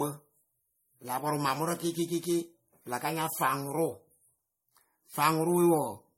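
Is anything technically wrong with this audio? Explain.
Yes. Throughout the speech, nothing sounds above about 16.7 kHz, and two different kinds of compression smearing are layered together, which points to transcoding between lossy codecs, likely a WMA-style encode re-encoded as low-bitrate MP3. Unlike a single lossy pass, each stage's artefacts are audible simultaneously.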